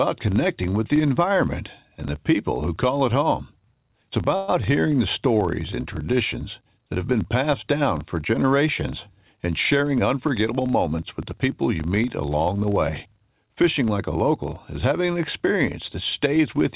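A speech recording carried over a call link, band-limited to nothing above 4 kHz, which fits G.711 A-law at 64 kbps. A 25 Hz buzz that follows the speech level runs throughout. It comes from a filter restarted on every block, each block starting with a small tick, which points to blocks of 40 ms. From 4.36 to 4.50 s, just before "hearing the", about 120 ms of held, fading sound is inserted. Nothing is lost, and the speech resumes late. This is likely a call audio freeze from delayed packets. From 9.76 to 11.49 s, between "down for generations and" and "you meet along the", a jitter buffer speed-up plays the speech about 7% faster at unchanged pitch. Roughly 150 ms of short pitch periods are trimmed, so it sounds hurried.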